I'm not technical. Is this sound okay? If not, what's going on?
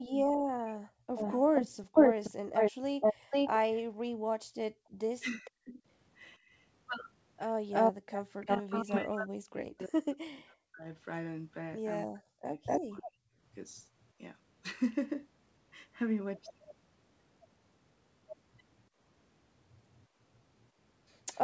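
No, there are three separate problems, all from the call's echo control.

Speech suppressed in double talk: when both people talk at once, the echo canceller can't tell the local talker from the other side coming out of the loudspeaker, so it turns everything down. That is the likely reason the speech sinks, almost to silence at its worst, from 0.25 to 1.21 s, 5.21 to 5.79 s, and through much of 8.4 to 13.19 s, where it keeps dipping for around three seconds in total.

Echo leak: on the side using a loudspeaker, the echo canceller probably failed to remove everything its microphone picked up, so some of the sound went back down the line. You hear a delayed repeat of the speech from 1.15 to 5.5 s (about half a second late), 7.71 to 8.99 s (about a third of a second), 12.65 to 13.82 s, and from 19.99 s to the end (both about a quarter of a second). It is as loud as the speech around 13 s and much quieter than it at the very end.

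Background gated by the echo canceller: while the loudspeaker was playing, the canceller shut the microphone down hard. Between 3.16 and 8.04 s, the background room sound briefly drops to near silence and comes back, for about a second in all.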